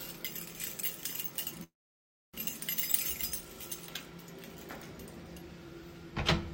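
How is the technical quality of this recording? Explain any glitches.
The recording has one clear glitch, a call audio freeze between 1.63 s and 2.36 s. The likely cause is packets held up in transit until the receiver's jitter buffer ran dry. The last sound is briefly stretched into a fading buzz, then about 0.64 s of near-silence follows before the audio resumes exactly where it left off. Nothing is lost, but everything afterward plays about 0.70 s late. On a waveform this shows as a short decaying tail, then a flat line; a spectrogram shows a smeared band fading into an empty gap.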